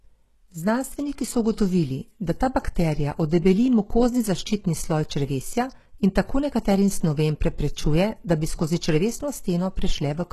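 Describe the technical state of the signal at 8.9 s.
HE-AAC compression is present at 8.9 s, as it is across the whole clip. The highs are likely not the original treble but a copy of lower bands shifted upward and shaped by a coarse envelope, with nothing above 12.3 kHz. The damage is heavy, which fits a very low bitrate around 16 kbps. The rebuilt harmonics do not line up with the real ones, so the speech's s sounds come across gritty, metallic or lispy.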